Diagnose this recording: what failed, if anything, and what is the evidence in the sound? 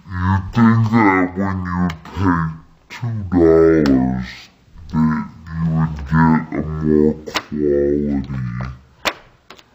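Stereo read as mono, at the sample-format stage: throughout, the sound runs at half speed and exactly an octave (12 semitones) low, because interleaved left and right samples play in sequence as one channel. A faint mirrored copy in the upper spectrum separates it from a simple sample-rate mismatch.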